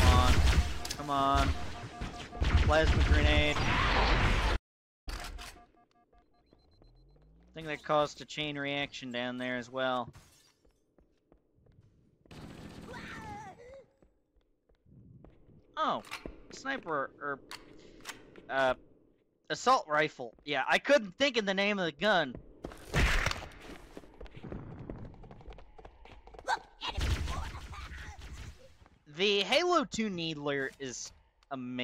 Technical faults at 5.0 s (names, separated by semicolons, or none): audio dropout to silence